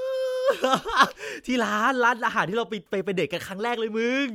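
No technical faults are audible anywhere in the recording.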